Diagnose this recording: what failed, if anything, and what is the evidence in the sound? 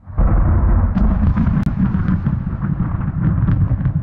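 A gap between stream segments at 1.63 s: a hard-edged silence of about 29 ms at a segment boundary during playback. Sound resumes intact, unlike a dropout, so nothing is lost.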